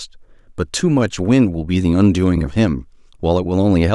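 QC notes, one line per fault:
No faults found on this speech clip.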